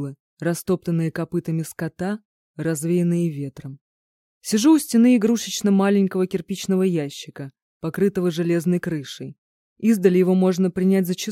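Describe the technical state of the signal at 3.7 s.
At 3.7 s the signal is intact, with nothing there that points to a technical fault.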